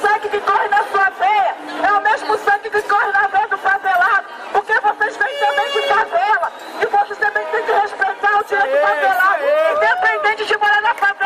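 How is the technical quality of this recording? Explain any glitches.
The technical quality of this recording is good, and there are no glitches to explain.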